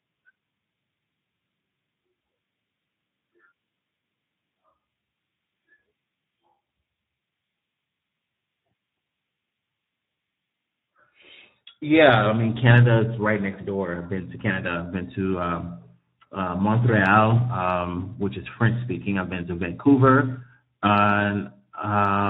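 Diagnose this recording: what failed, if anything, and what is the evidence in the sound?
The failure sits at the codec stage: the speech has been through Speex, a CELP coder built for older VoIP and game chat, at a low setting, which fits a rate of about 11 kbps. With so few bits for the excitation signal, the coder cannot rebuild the fine structure of the voice, and the damage is plainly audible across the whole clip as a noisy, hoarse quality. Any content above 4 kHz would be only a shaped, noise-like fill rather than real detail.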